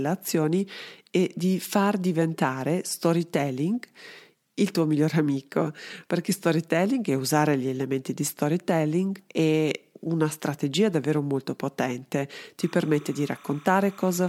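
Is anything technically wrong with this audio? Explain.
Yes, there's timecode bleed near the end. Right after "strategia davvero molto potente", from about 12.61 s to the end at 14.29 s, a chirpy warble creeps in behind the speech. That's linear timecode leaking over from a neighbouring track or cable. Its square wave flips between two pitches, around 1 and 2 kHz here, and the rhythm fits 30 fps code. It sits roughly 25 dB under the speech, so it's a faint but steady chatter.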